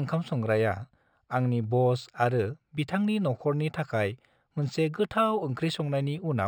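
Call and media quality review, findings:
Imaging from linear upsampling, throughout. Component: resampler, 12 kHz to 44.1 kHz using straight-line interpolation, a weak anti-imaging filter. Effect: top of band dulled, mirror image sitting between 6 kHz and 12 kHz at about -35 dB re signal. Audible as faint metallic shimmer on sibilants across the speech.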